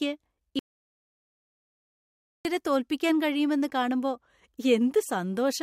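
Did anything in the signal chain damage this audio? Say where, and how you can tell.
Yes. An audio dropout to silence runs from 0.59 s to 2.45 s, about 1.86 s of speech lost. The sound cuts off mid-flow and the gap is silent, with no room tone underneath, so the loss happened upstream of the recorder or encoder, which kept writing empty samples. That points to the input stage, most likely a momentary disconnect of the device or link, or a stray mute, before the signal returns abruptly.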